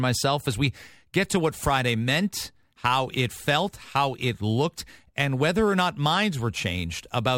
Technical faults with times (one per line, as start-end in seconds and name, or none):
1.41-7.38 crude rate conversion